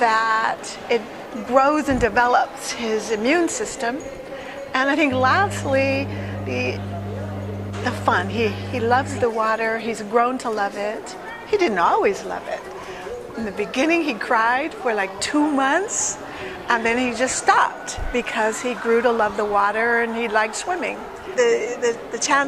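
From 5.12 to 9.24 s a steady low tone at 50 Hz sits under the sound: mains hum. Power-line current has leaked into the signal path, likely through a ground loop or stray field from a nearby transformer. It is prominent, roughly 10 dB below the program. Unlike handling noise or wind rumble, its pitch and level never waver, and unlike a harsh buzz it stays a fairly pure tone with some low harmonics.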